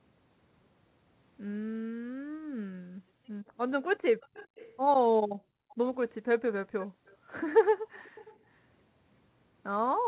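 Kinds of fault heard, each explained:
Background gated by the echo canceller: The room sound behind the speech sinks sharply and then comes back. The echo canceller hears its loudspeaker playing and turns the microphone down hard. The deepest dips reach about 40 dB, close to silence. The longest stretch runs from 1.84 to 3.49 s. Shorter dips follow at 5.24 to 5.70 s, 6.87 to 7.29 s and 7.77 to 7.97 s.
Echo leak: A faint, delayed copy of the speech trails the original by about 0.41 s. It sits well below the main speech, roughly 20 to 30 dB down. The likely cause is an echo canceller on a loudspeaker side letting part of what its microphone picked up slip through and go back. The copies appear at 4.20 to 4.72 s, 5.70 to 5.75 s, 6.82 to 7.32 s and 8.04 to 8.37 s.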